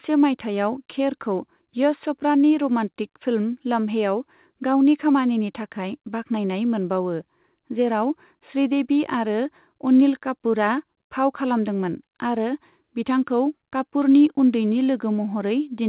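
Nothing stood out on listening to this speech recording, which carries the narrow telephone-band sound of a call codec with nothing above about 4 kHz, as expected for that path.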